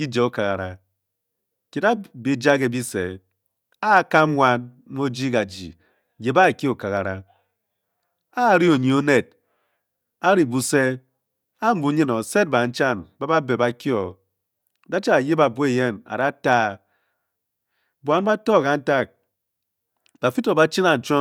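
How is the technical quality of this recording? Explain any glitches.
The recording has one persistent glitch: clock slip clicks from 0.12 s right through to 21.20 s. A soft rattle sits under the speech, with ticks roughly every 20 ms, about fifty a second. It's likely two unsynced clocks drifting by roughly a thousand parts per million, with a single sample dropped or repeated at each slip.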